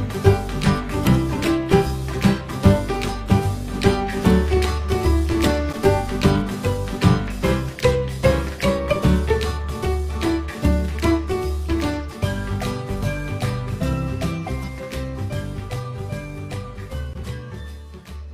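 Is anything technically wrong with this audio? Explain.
Yes. Compressed frames are skipped at 14.63 s and 17.19 s: missing or rejected frames make the audio jump ahead, roughly a tenth and a twentieth of a second. Each join is an abrupt splice where the audio leaps forward, visible as a small spectral discontinuity.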